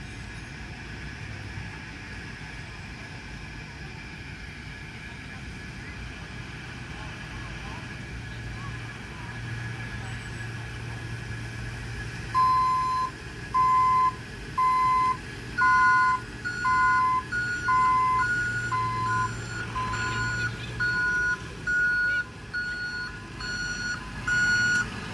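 Nothing stood out as a technical fault on listening.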